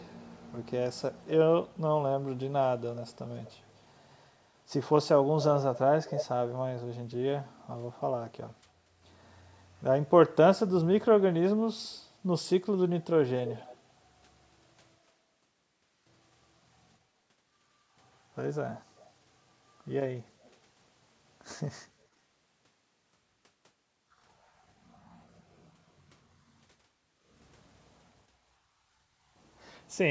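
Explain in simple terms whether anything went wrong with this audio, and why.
Faint, delayed repeats of the speech trail behind it, about a quarter of a second late, at 2.8–3.16, 3.44–3.79, 13.45–13.77 and 20.41–20.51 seconds. The repeat near 13.5 seconds is the clearest. This is echo leak, likely from a speakerphone whose echo canceller let some sound slip back.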